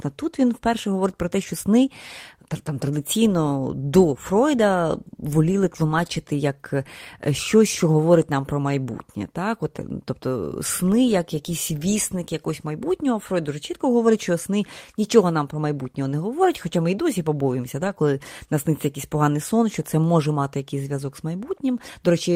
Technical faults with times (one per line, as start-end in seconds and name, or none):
17.83-17.89 lost packet rebuilt from error correction